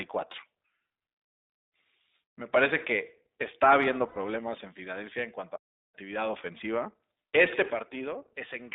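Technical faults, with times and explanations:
Throughout, iLBC codec: each 20 ms frame is coded independently at a low bitrate, consistent with the 15.2 kbps mode, and the band is held to roughly 300 Hz to 3.7 kHz. The speech sounds boxed-in and thin, with a plainly audible rough, synthetic edge.
4.08 to 4.17 s, lost iLBC frames: about 80 ms of packets, which fits four 20 ms frames, never arrived. The decoder filled the gap by repeating the last pitch cycle blended with noise, so the speech turns briefly into a held, buzzy vowel before snapping back clean.
5.55 to 5.95 s, playback stall: the output drops to dead silence for about 378 ms mid-flow, then resumes. This is likely the player starving for data or its thread being blocked, leaving nothing to send to the output until it recovered.
7.82 s to the end, sudden gain jump: the level drops by about 6 dB in a single step, with no fade, and the speech and background noise fall together. 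This is likely a gain setting or bit shift applied instantly rather than ramped.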